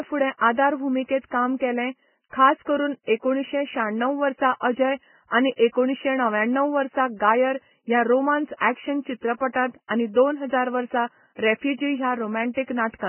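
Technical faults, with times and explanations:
Throughout, Vorbis compression: the speech is heavily damaged, with nothing left above 3.1 kHz. What remains sounds hissy and grainy, with roughened tones and blurred attacks. The likely cause is very low-rate Vorbis coding, near 9 kbps, turning fine detail into noise.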